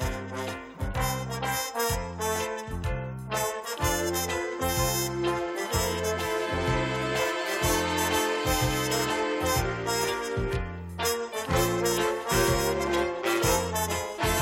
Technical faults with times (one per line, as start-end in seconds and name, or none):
none